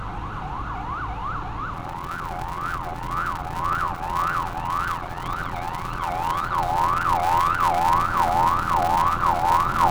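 From 1.73 s to the end, a block size mismatch (padded) zero-fills each 512-sample block, adding a buzz around 86.1 Hz and slowing the sound to 0.625 speed.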